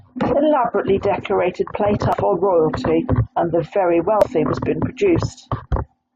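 Damaged data in a compressed stream at 2.13–2.15 s and 4.22–4.24 s: corrupted bytes derail the decoder, which loses frame sync and produces brief blips in the speech.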